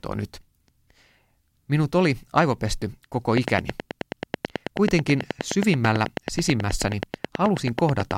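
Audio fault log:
3.37–8.12 s, train of clicks: steady ticking at 9.3 clicks per second, roughly fifty in all, standing well above the speech, likely from electrical interference or a faulty connection.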